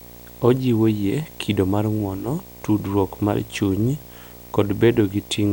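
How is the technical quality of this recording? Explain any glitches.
The technical quality is compromised by video or display buzz running through the whole speech clip. A screen or video cable is coupling into the audio path, adding a buzz at the 59.94 Hz field rate with gritty hash above it, plus a thin, very high whine at the 15.7 kHz line rate, all sitting roughly 20 dB under the speech. On a spectrogram this shows as a steady low stripe with harmonics, a hazy band above, and a fine constant line near 15.7 kHz. The waveform carries a persistent ripple visible in the pauses.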